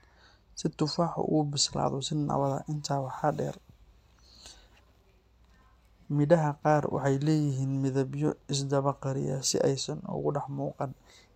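From 0.0 to 6.4 s the speech carries mains hum, a steady low tone at 60 Hz leaking in from the power line through a ground loop or nearby transformer, roughly 35 dB below the speech. On a spectrogram it shows as a thin constant horizontal line at 60 Hz that stops at 6.4 s.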